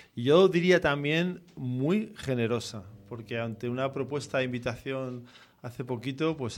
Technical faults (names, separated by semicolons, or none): mains hum